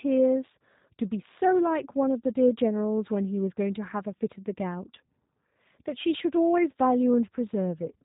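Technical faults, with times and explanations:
Throughout, block size mismatch (truncated): a 91.9 Hz buzz marks each block's discarded tail, but so little is lost that playback speed stays normal.
Throughout, G.729 codec: nothing passes above 3.8 kHz, and speech sounds plainly rough and synthetic from pulse-based frame rebuilding, consistent with an 8 kbit/s coder.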